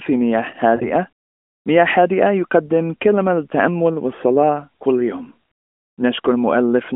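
Speech over an AMR narrowband mobile codec, with lost AMR speech frames at 0.76–0.87 s: the decoder smears the preceding sound with fading gain over a 40 ms gap, which fits two lost 20 ms frames, before recovering.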